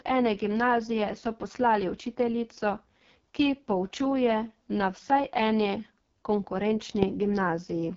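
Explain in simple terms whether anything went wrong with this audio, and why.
The speech has been through the AMR wideband (HD Voice) codec, the phone-network voice format, at what sounds like one of its lowest quality settings. From start to finish the voice is rough and raspy, because the codec rebuilds speech from a simplified model of the mouth and throat rather than keeping the actual waveform. Nothing is present above about 7.4 kHz, so the top end of the voice sounds dull and thin.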